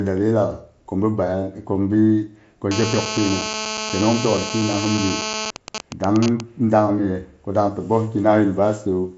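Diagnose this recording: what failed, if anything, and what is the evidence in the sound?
GSM phone buzz, 2.71 to 5.51 s: a steady, raspy 217 Hz buzz about 6 dB below the speech. A phone in a call is radiating bursts that the analogue wiring rectifies.

GSM signalling bursts, 5.56 to 6.41 s: even ticks with a longer 217 Hz buzz twice a second, roughly as loud. The same phone sends only brief burst groups while its user is silent, again rectified in the analogue wiring.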